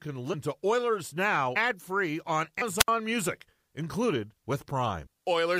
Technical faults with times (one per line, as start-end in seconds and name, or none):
0.33 compressed frames skipped
1.55 compressed frames skipped
2.61 compressed frames skipped
2.77-2.89 wireless microphone squelch dropout
5.05 compressed frames skipped